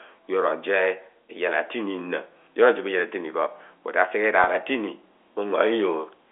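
At 4.44 s a stretch of about 30 ms of the speech stream never arrived, which fits a single lost packet, and the receiver filled the gap with packet loss concealment by pitch repetition, looping the last pitch period it had until audio resumed at 4.47 s. Because the gap is so short, there is no fade to silence, only a brief held, slightly buzzy tone where the sound freezes for a moment. The G.711 telephone coding keeps everything within the 300 to 3400 Hz line band.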